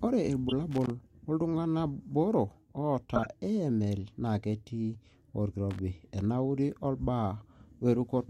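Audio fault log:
0.48 to 0.53 s, corrupt frame decoded: a short, harsh blip in the speech, loud, peaking at about -5 dBFS. What's happened is that a compressed frame, or really a run of about three, had flipped bits, and the decoder played them anyway. Misread gains and codes put energy at frequencies where it doesn't belong, so instead of a clean dropout you get a chirpy burst that lasts just as long as the damaged frames.
0.71 to 0.90 s, loose connector crackle: an irregular scratchy burst, a bit under two tenths of a second long. That's a worn or dirty contact making and breaking as it shifts, chopping the signal on and off rapidly, and any DC sitting on the line turns each break into a little pop. The uneven, gritty texture is the giveaway that it's mechanical rather than digital.
3.16 to 3.26 s, corrupt frame decoded: same mechanism as the first one, this time across roughly four frames, so it runs to about a tenth of a second. 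It's noticeably quieter, with the error peaking around -15 dBFS. The wrong-frequency energy again lines up with the span of the damaged frames.
5.71 to 5.79 s, loose connector crackle: a shorter repeat of the scratchy burst, only about 80 ms this time. The contact breaks and remakes again, chopping the signal, giving that brief irregular crackle.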